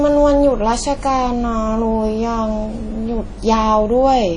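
From start to finish the speech carries plainly audible codec damage, most likely WMA compression at a low bitrate, something like 32 kbps. Everything above 10.1 kHz is gone, and long transform blocks smear quantisation noise into a ringing, washy hiss that breathes with the voice.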